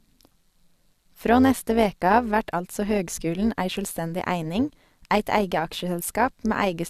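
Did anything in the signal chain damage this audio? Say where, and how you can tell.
Yes: overlap-add ripple in frame-based call processing throughout the speech, with level pulsing about 6 dB around 150 times a second, as a metallic buzz with extra tones around each note from windows not summing to constant gain.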